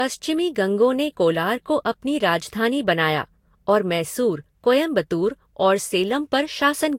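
Generation loss runs throughout the speech, nothing above 16.6 kHz. It likely comes from about three Vorbis-style re-encodes near 64 kbit/s, each requantising afresh, leaving swirly, hollow, smeared attacks.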